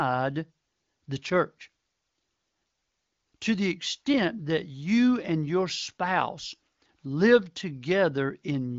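No technical faults can be heard in this speech recording. It carries the band limit of the AMR wideband (HD Voice) codec, with nothing above 7.6 kHz and at most faint coding damage, which fits a rate of about 18.25 kbit/s.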